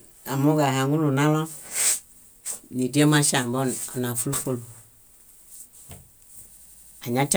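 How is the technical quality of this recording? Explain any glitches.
The recording has one clear glitch near the end. From 6.57 to 7.00 s, a system hang loop repeats one 85 ms slice of speech five times, at about 11.7 Hz, which fits a 4096-sample buffer. The machine stalled while the hardware kept replaying its ring buffer, giving a machine-gun stutter. Unlike a dropout stutter, each repeat is identical and nothing falls silent.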